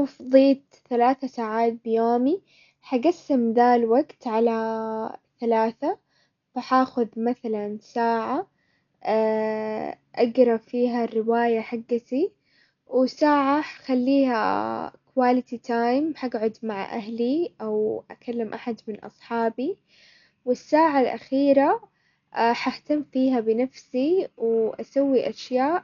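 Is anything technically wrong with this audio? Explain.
Yes. Throughout the speech the sound is dull and boxed in, with nothing above about 6.9 kHz, and a rough, fluttering hiss clings to the voiced tones. This is heavy damage that likely comes from Dolby Digital compression at a very low bitrate, one that fits roughly 48 kbps. Starved of bits, the encoder cut off the upper band and gave many frequency lines no detail at all, so the decoder filled those gaps with dither noise.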